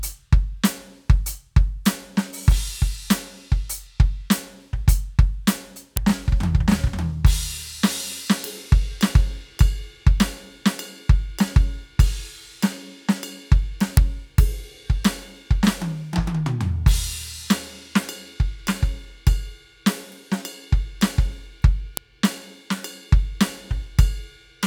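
At 5.97 s, 13.97 s and 21.97 s the music is broken by a sharp, loud click. Each is a file header played as audio. Pieces about 8 s long were joined with their headers intact. Those header bytes sound as a brief snap.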